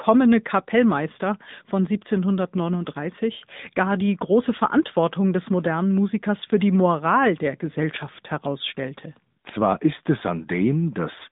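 Throughout, AMR narrowband mobile codec damage: nothing above 3.8 kHz, little below 150 Hz, and a plainly buzzy, synthetic voice texture fitting a 10.2 kbps mode.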